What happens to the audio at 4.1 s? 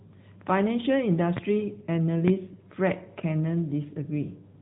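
AMR narrowband mobile codec damage is present at 4.1 s, as it is throughout the clip. The speech was resampled to 8 kHz and rebuilt from a vocal-tract model with a few pulses per 5 ms subframe. Nothing above 3.8 kHz survives, and the voice sounds plainly buzzy and synthetic, which fits a mode of about 10.2 kbps.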